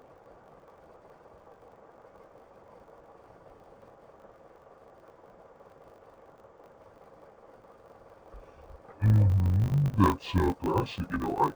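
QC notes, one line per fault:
Throughout, interleaved audio read as planar: each 20 ms block's alternating left-right samples split into halves at half speed, so the speech drops an octave and buzzes at 50 Hz.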